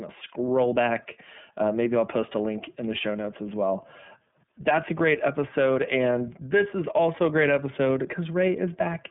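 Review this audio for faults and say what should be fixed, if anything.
The whole clip carries iLBC codec damage: the speech sits in a narrow band from roughly 150 Hz to 3.5 kHz, with nothing above 3.7 kHz. It sounds plainly rough and synthetic because each frame's excitation is coded independently, and the roughness fits iLBC's 30 ms frame mode. To prevent it, record or route the call through a wideband codec such as Opus instead of iLBC.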